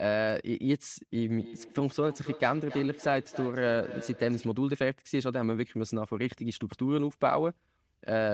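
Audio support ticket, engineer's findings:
Feedback echo between two devices, 1.39 to 4.61 s. Speech recurs about every 0.3 s, repeats peaking about 14 dB under the direct signal, each thinner and more ringing. A second device on the same call in the room is replaying this mic and feeding it back, and the local echo canceller ignores output it didn't play. Spectrogram: stacked copies of each syllable at a regular spacing, fading and narrowing, all under the call processing's 8 kHz ceiling. Waveform: trailing decaying bursts.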